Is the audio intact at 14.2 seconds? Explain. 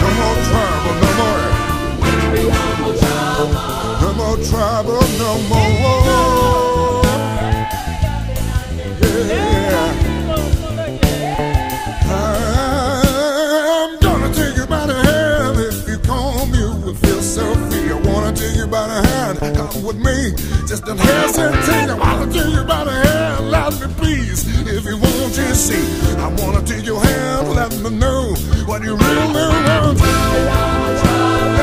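Yes, the audio is intact at 14.2 seconds, with no dropout, click, distortion or other fault audible at that point.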